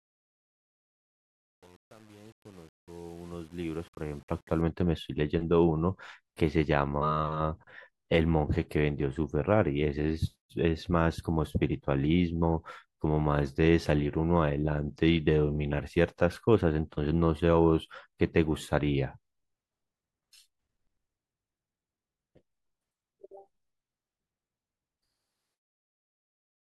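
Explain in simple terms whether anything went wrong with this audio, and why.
Something did go wrong at the start of the speech. From 0 to 4.61 s the clip fades in, and the quiet part sounds gritty, worst from 0 to 4.41 s. This is truncation distortion on a fade. The volume stage kept too few digital steps, which fits an 8-bit stage, and added no dither, so very soft sound gets chopped into coarse blocks.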